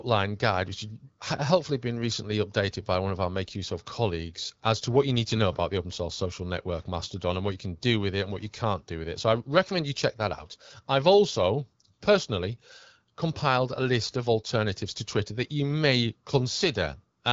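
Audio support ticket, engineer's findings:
No faults found in the speech recording. The AMR wideband (HD Voice) path is heard working at its 12.65 kbit/s rate, with only light coding texture on the speech.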